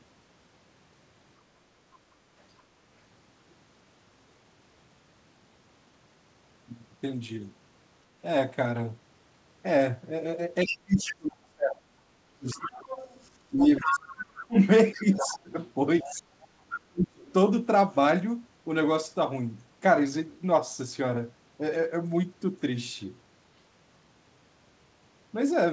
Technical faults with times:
10.64-12.91 speech suppressed in double talk
10.67-11.03 other side's voice leaking through
12.49-14.12 other side's voice leaking through
13.53-17.24 speech suppressed in double talk
14.93-15.38 other side's voice leaking through
16.00-16.47 other side's voice leaking through
17.29-17.33 other side's voice leaking through

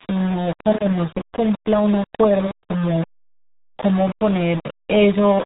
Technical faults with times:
0.00-5.46 low bit depth without dither
0.00-5.46 RealAudio 14.4 codec

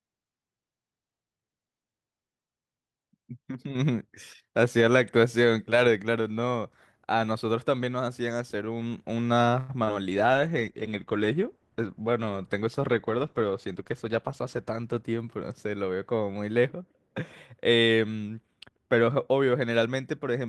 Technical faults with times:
9.59-9.71 short stall from a late packet
9.85-9.88 short concealed packet loss
10.11-16.09 call bitrate drop
13.11-14.10 jitter buffer speed-up

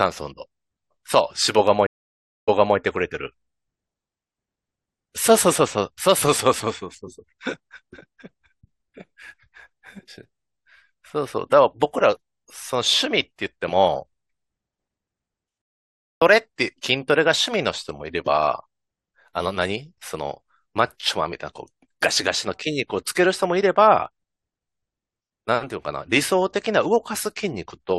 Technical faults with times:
1.86-2.77 stream reconnect
15.62-16.22 stream reconnect

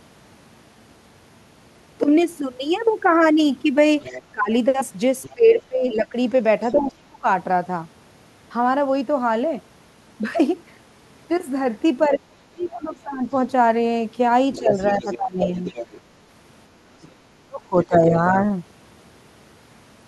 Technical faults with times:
4.01-6.78 other side's voice leaking through
4.19-7.26 speech suppressed in double talk
12.08-18.15 speech suppressed in double talk
12.64-15.99 other side's voice leaking through

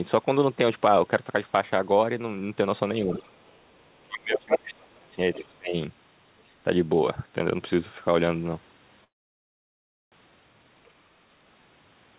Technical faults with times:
3.03-3.25 speech suppressed in double talk
3.11-3.57 other side's voice leaking through
3.74-5.74 speech suppressed in double talk
5.34-5.38 other side's voice leaking through
6.46-6.51 other side's voice leaking through
9.04-10.14 call audio freeze
10.86-10.91 other side's voice leaking through

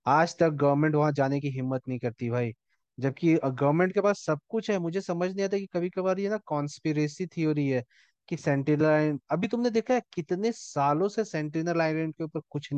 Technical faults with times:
none

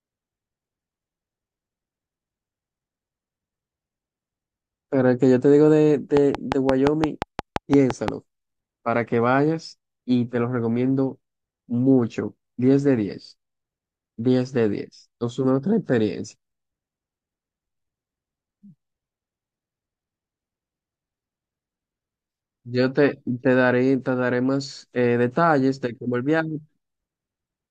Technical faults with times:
6.17-8.09 train of clicks

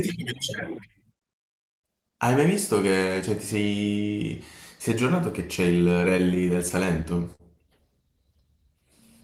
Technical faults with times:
6.17-7.41 repeated stalls (stutter)

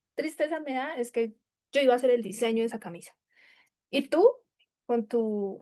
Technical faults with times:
none

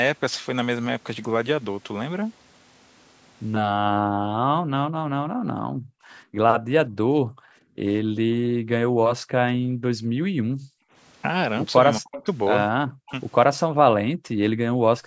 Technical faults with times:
3.61-10.93 background gated by the echo canceller
11.98-12.25 speech suppressed in double talk
12.14-12.23 echo leak
12.97-13.12 speech suppressed in double talk
14.05-15.06 background gated by the echo canceller

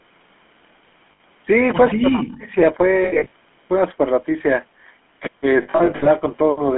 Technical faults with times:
0.00-6.78 GSM full-rate codec
1.12-1.20 lost GSM frames
3.04-3.32 lost GSM frames
5.62-6.07 lost GSM frames

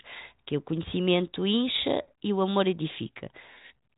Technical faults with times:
none

